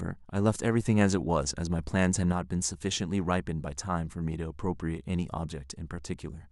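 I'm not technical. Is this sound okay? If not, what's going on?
No. There is a sudden gain jump from 0.82 to 2.32 seconds: the speech abruptly gets louder at 0.82 s, stays boosted, then drops back just as suddenly at 2.32 s. The background noise rises and falls along with the voice. The likely cause is a volume setting being switched on and off instantly inside the recording chain, rather than being faded in and out smoothly.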